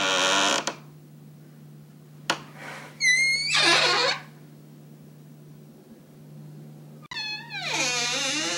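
At 7.04 s the sound breaks off for about 52 ms and returns by 7.14 s. This is an intermittent contact: a loose plug or cable briefly lost its connection, so the signal path opened and then closed again. The gap is framed by crackle where the contact scrapes open and shut, and faint hiss fills it. That rough, noisy edging is what separates it from a digital dropout, which leaves a clean, abrupt silence.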